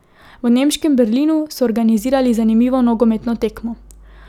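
At 1.98 s a mains hum enters the speech and stays until the clip ends at 4.29 s. It is a steady low tone at 50 Hz, with some low harmonics above it. The level sits roughly 25 dB below the speech. The power line is leaking into the signal path. A ground loop or a nearby transformer is the usual route.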